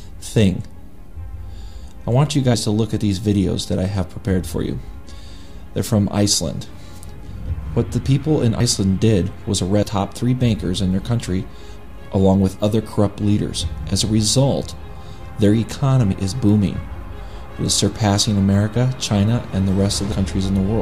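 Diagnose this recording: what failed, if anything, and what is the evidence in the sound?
Compressed frames skipped at the codec or storage stage: the audio leaps ahead at 2.54, 9.83, 16.12 and 20.12 s, losing roughly 70 ms, or about 200 ms at 9.83 s, which fits whole 26.1 ms frames.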